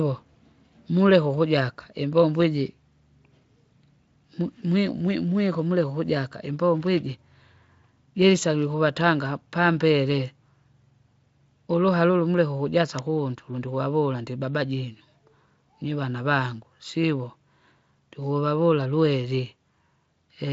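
At 9.01 s a sharp snap cuts across the speech. A second one lands at 12.99 s, right after "ulu muleke ukujasa". Each is an electrical switching spike, lasting only about 1 ms and 3 ms. They sound like sharp snaps laid over the sound. The likely cause is a nearby switch or motor arcing briefly, with the audio line picking up the burst. The Speex-coded speech underneath carries on without break.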